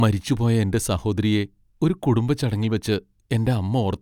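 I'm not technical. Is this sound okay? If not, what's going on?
Yes, this speech recording sounds fine, with nothing going wrong that you would need to worry about. There is no technical problem to report here.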